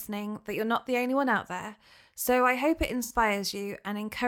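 At 3.03 s, just after "I hope it", the speech turns smeared and noisy for about 64 ms, until 3.12 s. This is AAC frame loss with concealment. A gap that size fits roughly three lost AAC frames, and the decoder covered it by reusing the last good spectrum. On a spectrogram the harmonic striations blur into a diffuse, flat-textured block. The waveform keeps similar energy but loses its periodic shape.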